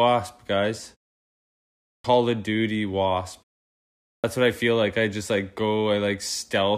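A speech clip with a clipped start after a pause, twice. After about 1.1 s of silence, the sound at 1.99 to 2.04 s loses roughly 54 ms. After 0.84 s of silence, "what I feel like" begins at 4.19 s with about 48 ms missing. The output device sleeps during silence and wakes too slowly, so onsets jump in abruptly.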